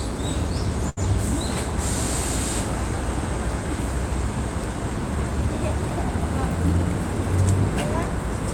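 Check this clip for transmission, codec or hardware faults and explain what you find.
One transmission fault is present: a short stall from a late packet between 0.89 and 0.99 s. A packet arrived after its playout time, so the jitter buffer ran dry and the receiver extended the last audio it had, filling about 74 ms, then resumed from the same point once the packet landed. Nothing is lost, but playback now runs 74 ms later. It is heard as one sound held slightly too long, with a faint buzzy or dipped texture.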